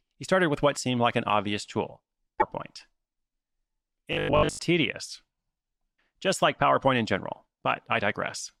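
Just after "like an obvious tool", from 2.39 to 2.42 s, there is a brief glitch of about 32 ms, roughly the length of one 26.1 ms MP3 frame. The sound jumps ahead. The likely cause is a broken MP3 bit reservoir. Frames were lost, so the frame that follows borrowed its data from bytes that belonged to a different frame, and it decoded wrongly.

From 4.13 to 4.59 s, the speech turns into a rigid, metallic buzz pitched at 50 Hz. It still roughly follows the speech, but it has the flat drone of a machine. This is robotic sound from repeated short buffers, and the likely mechanism is late-arriving audio being covered by looping the last 20 ms chunk. About 70 percent of that stretch is repeated material, and the fixed repetition rate of 20 ms imposes the 50 Hz pitch.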